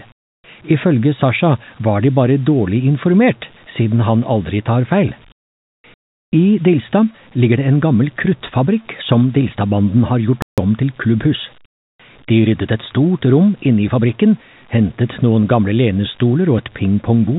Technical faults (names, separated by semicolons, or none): comfort noise in place of the background; playback stall